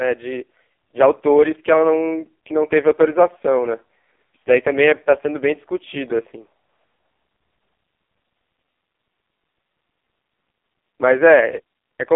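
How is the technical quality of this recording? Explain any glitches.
Quality is poor, with one fault present throughout. AMR narrowband mobile codec, for the whole clip: speech squeezed through a 300 Hz to 3.5 kHz band, rebuilt from a pulse-driven vocal-tract model, sounding heavily buzzy and synthetic, consistent with roughly 4.75 kbps.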